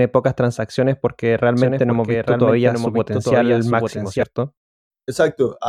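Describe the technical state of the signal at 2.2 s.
At 2.2 s the speech carries a doubled audio track, running from 1.57 to 4.23 s, just after "pocas transacciones porque". A full-band copy about 5 dB quieter trails roughly a second behind, likely from a second, slower capture path. On a spectrogram, identical formant patterns repeat about one second apart with sharp onset and offset edges.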